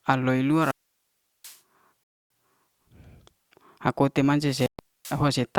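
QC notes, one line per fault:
0.51–1.59 s, wireless microphone squelch dropout: hiss swells, then a 0.73 s hole of near silence before speech returns, as the fading radio signal tripped the receiver's squelch.
2.04–2.30 s, Bluetooth stall: speech cuts to dead silence for 0.27 s, then resumes, likely because interference delayed packets and the headphone buffer ran dry.
4.43–5.27 s, wireless microphone squelch dropout: static rises, then the output mutes for 0.34 s before speech comes back, as the weakening radio link fell below the squelch threshold.
4.66–4.79 s, Bluetooth stall: a clean 0.13 s gap of silence overlapping the dropout above, likely playback pausing while resent packets arrived after interference.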